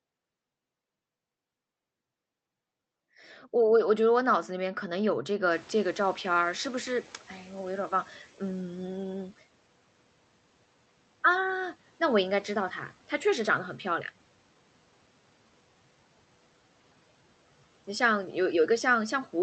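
Speech, with a noise suppressor catching up from 5.50 to 8.20 s: the room noise jumps by about 24 dB around 5.5 s and first comes through with less reduction, then sinks by about 8 dB over roughly 2.7 s as the estimate adapts. A steady downward glide that tracks no speech pauses separates it from gate pumping. The call path's Opus coding tops out at 8 kHz.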